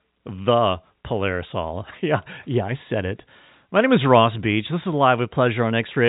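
Nothing stood out on listening to this speech clip, which carries the narrow, telephone-band sound of G.711 coding with nothing heard above about 3.8 kHz.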